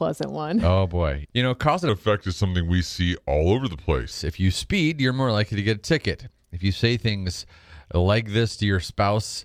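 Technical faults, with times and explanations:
1.89–4.11 s, section at the wrong speed, after "know cause and": speech slows to 0.86x and drops roughly three semitones, likely from a mismatched playback clock.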